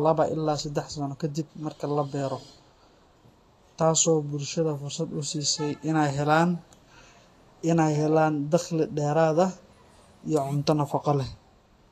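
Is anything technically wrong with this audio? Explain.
Yes, there are two faults.

Throughout, the speech is hissy and grainy with nothing above 14.2 kHz, likely from Vorbis compression at a low bitrate around 34 kbps, which coarsely quantises treble.

From 0.60 s to 11.88 s, a click recurs every 1.61 s, roughly seven times. These are likely clock drift buffer slips: mismatched device clocks periodically drop or repeat a few samples.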